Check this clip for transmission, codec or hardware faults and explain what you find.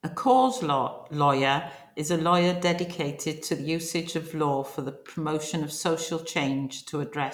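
No transmission, codec or hardware faults are audible anywhere in the speech.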